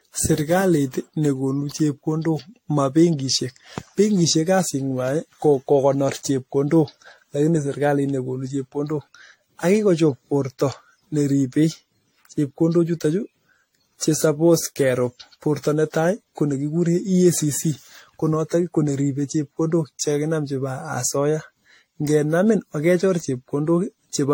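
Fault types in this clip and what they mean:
Generation loss: The speech carries a swirling, smeared texture and a hollow, phasey quality throughout, more degraded than a single pass at a moderate bitrate would leave it, with consonant attacks blurred and softened. Nothing is present above 16.6 kHz. The likely cause is repeated lossy re-encoding, around seven passes, each requantising on a shifted frame grid so the noise and spectral holes accumulate. The character fits an AAC-LC chain at about 64 kbit/s.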